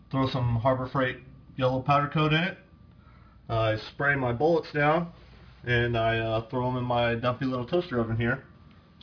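Aliasing runs throughout. The audio was downsampled without filtering, which fits 11 kHz, so content above 5.5 kHz folds back as gritty, metallic tones about 30 dB down.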